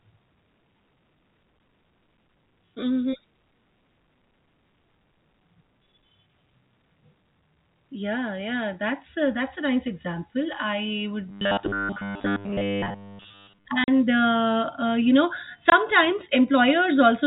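Telephone-band speech, capped at 4 kHz by its G.711 coding, turns into a rigid metallic buzz from 11.29 to 13.65 s. This is robotic sound from repeated short buffers. The buzz sits fixed at 100 Hz, which fits a 10 ms stretch being replayed over and over. The likely cause is audio arriving too seldom, so most of the real sound in that span is skipped. Unlike a natural pitch, the buzz stays flat while the speech moves only roughly underneath it. Just after that, from 13.84 to 13.88 s, and again from 15.70 to 15.72 s, there is packet loss filled with silence. The gaps last 40 ms and 20 ms, which fits two packets and then one packet of 20 ms each. These are clean dropouts with hard edges, not repetition, so no buzz forms in them.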